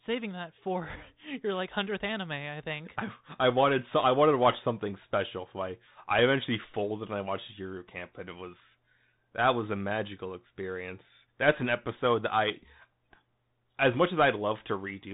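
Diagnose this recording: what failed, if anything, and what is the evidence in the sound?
The codec stage failed. Throughout the speech, nothing above 3.8 kHz survives, and a granular hiss sits underneath. Sibilants sound scratchy. This is the Bluetooth CVSD headset codec, which fits a 64 kbps link. Its one-bit adaptive step cannot track fast, loud high content.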